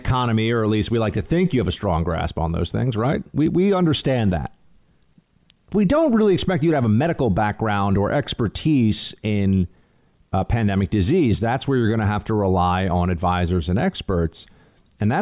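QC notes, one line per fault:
Nothing stood out on listening to the speech in this clip.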